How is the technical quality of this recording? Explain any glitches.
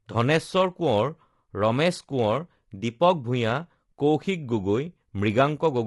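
The speech has a plainly audible compression fault that runs the whole way through. Low-delay AAC compression, present from start to finish, is the likely cause: a low-delay codec of the AAC-ELD kind slices the audio into very short frames, which cannot separate closely spaced pitch harmonics well and spend bits less efficiently. At a rate that fits around 32 kbps, the voice sounds rough and grainy, with noise filling the gaps between harmonics and a dulled, artificial-sounding top band.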